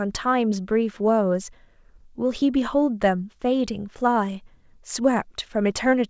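Clock drift between sender and receiver runs through the whole speech clip. The sender's clock is roughly five percent fast, so audio arrives quicker than the receiver plays it out and the jitter buffer keeps filling. On a waveform the syllables sit slightly closer together than natural pacing would give.

Repeated timing corrections run from 0.01 s to 6.09 s. The receiver trims short pieces to keep up, for a net speed of 105%. They sound like faint skips and a hurried, uneven tempo. The waveform shows small splices at irregular spacing. On the spectrogram, which is empty above 8 kHz because of the call codec, harmonic tracks break briefly at each splice.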